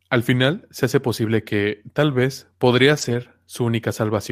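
From 2.93 to 3.15 s, a lost packet is rebuilt from error correction: the speech continues without a gap but turns rougher and noisier for about 120 ms, which fits several lost packets replaced by low-bitrate copies, unlike concealment's smeared or buzzy guesswork.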